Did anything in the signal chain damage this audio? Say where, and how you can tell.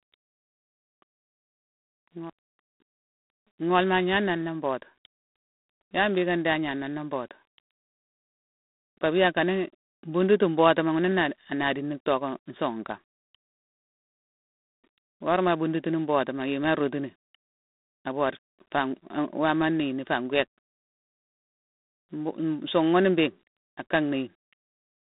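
Yes. Throughout the speech a harsh, rasping hiss rides along with the talker, swelling on louder syllables and falling away in pauses, and the sound is boxed into a telephone band of roughly 200 Hz to 3.7 kHz, with nothing above 3.8 kHz. That points to the codec stage: G.726 ADPCM, coding each sample as a coarse difference from an adaptive prediction. The plainly audible, level-tracking noise fits the 24 kbit/s mode.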